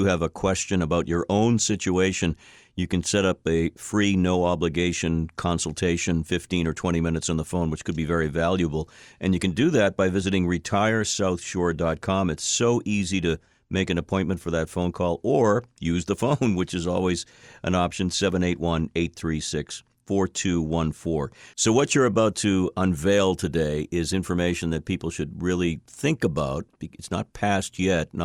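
A speech recording with no technical faults to report. Nothing in it calls for a time or a cause to be noted.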